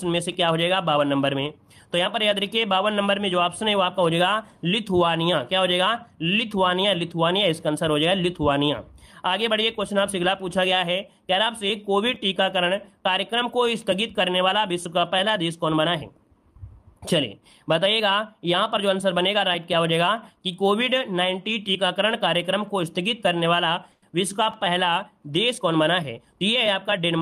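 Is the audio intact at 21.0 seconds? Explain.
Yes, the audio is intact at 21.0 seconds, with no dropout, click, distortion or other fault audible at that moment.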